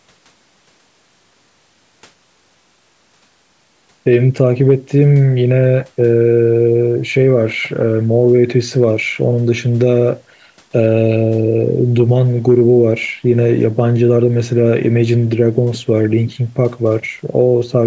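Nothing here counts as a fault: the speech has simply passed through a call's microphone processing, so the lowest bass is trimmed and nothing reaches above 8 kHz, which is exactly what that path normally does.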